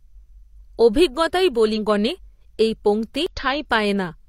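At 1.73 to 1.78 s and again at 3.26 to 3.32 s, damaged data in the compressed stream breaks the speech. The decoder misreads corrupted frames, loses sync and hunts for the next valid header, producing a short glitch of about 50 ms the first time and about 56 ms the second.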